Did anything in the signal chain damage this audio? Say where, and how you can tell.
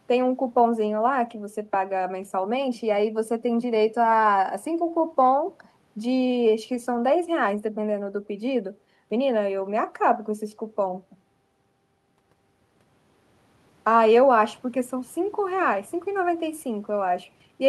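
No, nothing in this speech stood out on listening as a sign of damage at any stage of the chain.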